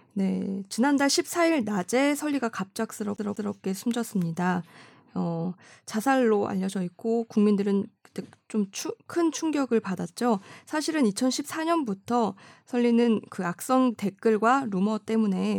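A speech clip with a CD stuck on one turn from 3.16 to 3.55 s: a scratch bounces the laser back, so the same 192 ms slice plays twice with a brief mute at each jump. On the waveform it shows as identical repeated blocks separated by thin gaps.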